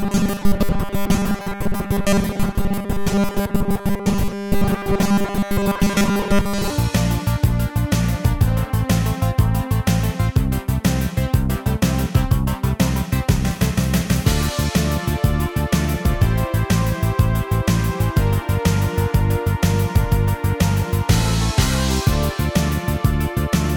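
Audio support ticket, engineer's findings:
Robotic sound from repeated short buffers, 0.01–6.7 s: fixed 200 Hz buzz, no silent gaps as with dropouts. Likely underrun looping 5 ms blocks, most audio skipped.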